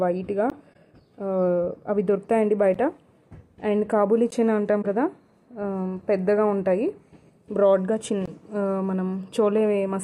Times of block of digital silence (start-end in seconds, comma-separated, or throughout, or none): 0.50, 2.74, 4.30, 8.26